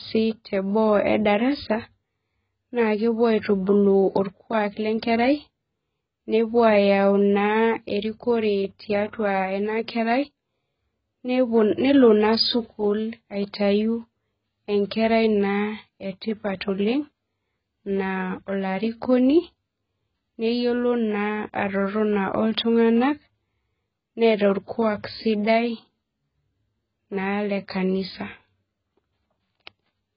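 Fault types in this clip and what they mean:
AAC compression: The speech sounds dull and muffled for the whole clip. Nothing is heard above 5.3 kHz, so sibilants lose their edge. The damage is heavy. Consonants smear, and hissy sounds take on a warbling, fizzy texture. The likely cause is low-bitrate AAC-LC coding. The encoder discards the top band and quantises what remains coarsely against a hearing model. The sound fits a bitrate near 12 kbps.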